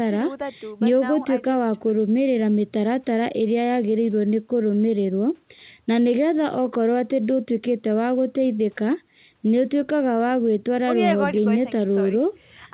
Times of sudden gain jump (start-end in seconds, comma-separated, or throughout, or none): none